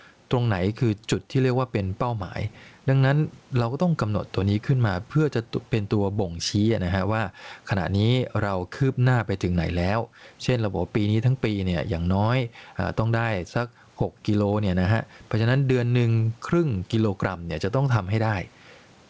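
Speech with gain pumping throughout: the gain swings by around 10 dB, most likely because a fast limiter is clamping gain that was set too high. On a waveform this shows as a squashed, even envelope. A spectrogram shows the faint room noise, about 45 dB below the speech, with everything above 8 kHz missing, which fits a G.722 call path.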